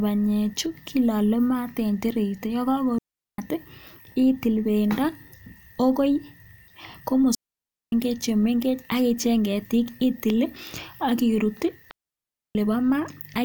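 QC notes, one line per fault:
2.98–3.38 s, 7.35–7.92 s, 11.91–12.55 s, digital wireless dropout: the receiver mutes for 0.40, 0.58 and 0.64 s after losing too much link data. The holes are clean near-silence with quick fades, unlike analogue dropouts, which hiss or crackle.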